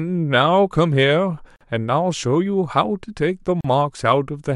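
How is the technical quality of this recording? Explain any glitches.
The recording has two brief dropouts in the speech. Both are gaps at a join of encoded pieces, at 1.56 to 1.61 s (about 46 ms) and 3.61 to 3.64 s (about 38 ms), spaced 2 s apart. That spacing fits separately encoded two-second segments joined untrimmed, leaving encoder start delay and end padding as short silences with smeared edges before the sound resumes where it stopped.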